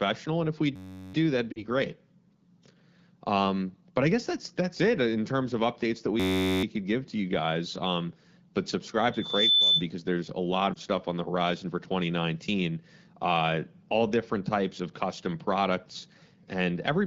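Speech carried over the AMR wideband (HD Voice) codec is interrupted by a system hang loop from 0.76 to 1.14 s and again from 6.20 to 6.64 s. A 10.67 ms slice repeats, giving a steady 93.8 Hz buzz that fits a 512-sample buffer. Lost AMR speech frames cause a drop toward near silence from 1.52 to 1.64 s and a brief dip or warble at 10.74 to 10.78 s. The decoder reuses the last good frame as it fades. These gaps sound like about 40 ms and 20 ms of loss. A loudspeaker feedback squeal appears from 9.12 to 9.85 s. A 3.5 kHz tone swells over roughly 0.4 s to about 5 dB above the speech, as the microphone picks up its own loudspeaker.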